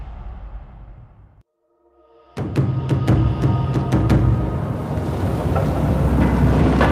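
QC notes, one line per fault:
No faults heard anywhere in the audio.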